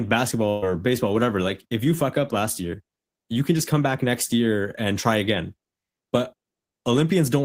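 At 0.49 s a burst of packet loss cuts into the speech. Several packets in a row never arrived in time. The receiver covers the gap by extending the last sound for about 125 ms and letting it fade. This is heard as a held, fading continuation of the last sound rather than silence. About 120 ms of the original speech is simply gone. Normal audio returns at 0.64 s, just before "baseball whatever like if".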